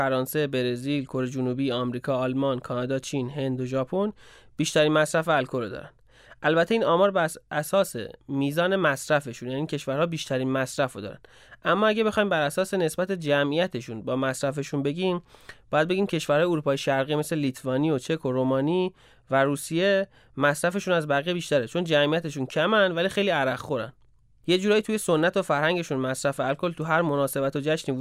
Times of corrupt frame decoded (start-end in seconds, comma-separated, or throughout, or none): none